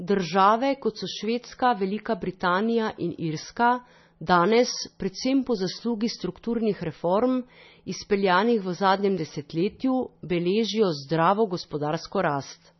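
Throughout, likely heavy MP3 compression, consistent with about 24 kbps, removes everything above 5.9 kHz and drops weak detail, leaving the speech dull and watery.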